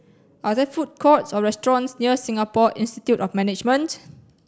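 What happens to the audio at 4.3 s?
Nothing goes wrong at 4.3 s: the audio continues cleanly through that point with no dropout, click or other fault.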